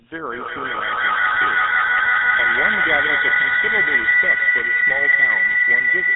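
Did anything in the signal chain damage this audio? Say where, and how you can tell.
Yes. At the codec stage, the whole clip carries the buzzy, gravelly roughness of the GSM full-rate codec, and its band is cut to roughly 200 Hz to 3.7 kHz, which fits a 13 kbps GSM link. The codec models the vocal tract and excites it with a sparse, regularly spaced pulse train, so fine detail is replaced by coarse buzz. On a spectrogram, energy stops flat at 3.7 kHz, and voiced stretches show smeared, grainy harmonics.

At the call-processing and acoustic stage there is a feedback howl from 0.32 s to the end of the clip. Two devices in the same room are on the call, so the microphone picks up the loudspeaker and each pass round the loop adds gain. The repeats narrow to a tone around 2 kHz that peaks about 13 dB above the speech. The loop's delay is roughly 150 ms. A spectrogram shows a bright horizontal line near 2 kHz.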